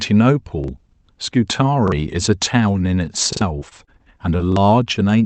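At 0.64 s the first repeated buffer appears: fresh audio arrived late, so the same 43 ms block, which fits a 2048-sample buffer, was played once more. That causes a brief stutter with a hard join. The same happens at 1.88 s. At 3.33 s the block plays twice extra, about a tenth of a second of real sound lost. In a waveform these show as identical adjacent blocks with a step at each join. A spectrogram shows a thin vertical line at each seam.

Short concealed packet loss follows at 3.59, 3.69, 3.85 and 4.37 s. Each time about 20 ms of the call reached the decoder too late, and the receiver bridged the gap by extending the preceding sound, then blended back into the real signal. Each is heard as a quick smear or wobble. On a spectrogram the sound runs on flat and slightly blurred for those few hundredths of a second, while the waveform keeps going without a gap but loses its fine detail.

One final repeated buffer at 4.52 s replays a single 43 ms block, giving another short stutter with the same visible seam and duplicated pattern.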